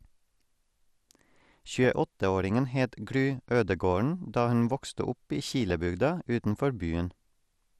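MP2 compression runs throughout the speech: it sounds dull, with a gurgling, granular roughness. This likely comes from MPEG Layer II coding at a low rate, fitting around 80 kbps, starving the upper sub-bands of bits so they drop out or are coarsely quantised.

DAB burbling appears from 5.61 to 5.72 s as a brief burst of burbling. Bit errors, at a rate of a few tenths of a percent, slipped past error correction and corrupted sub-band samples across several consecutive frames, putting short blips of noise into individual bands.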